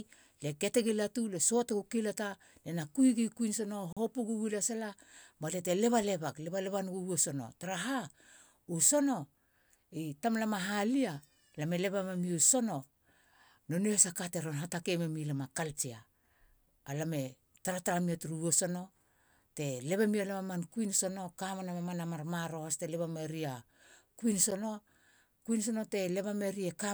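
At 1.69 s, 3.93 s and 24.51 s the program likely failed to fill its output buffer in time, and each block of samples went out as zeros: a block of digital silence. The signal drops out and returns with no fade. The 6 ms gap at 1.69 s and the 10 ms gap at 24.51 s are heard as ticks or dips. The 40 ms gap, from 3.93 to 3.97 s, is long enough to register as a brief hole in the speech.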